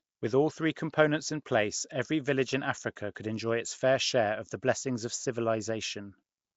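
From start to finish the speech carries a rough, hissy halo and a smeared, underwater quality, with nothing above 7.7 kHz. This is likely Nellymoser compression, the old Flash microphone codec, whose noise-filled empty bands fit a rate around 32 kbps.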